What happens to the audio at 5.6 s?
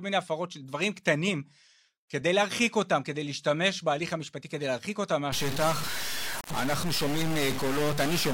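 At 5.6 s the speech carries a harsh, buzzy distortion that began at 5.32 s and lasts to the end. The likely cause is a stuck bit, forcing samples off by a fixed step of about -30 dBFS. Pauses fill with hiss.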